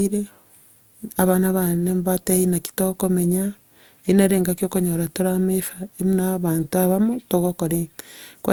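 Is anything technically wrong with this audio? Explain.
Yes. Throughout the speech there is generation loss, likely from about three passes through a lossy codec whose character fits Opus at 64 kbit/s. Each re-encode quantised on a shifted frame grid, so the sound turns swirly and hollow, consonant attacks smear, and a spectrogram shows an empty band above 20.2 kHz.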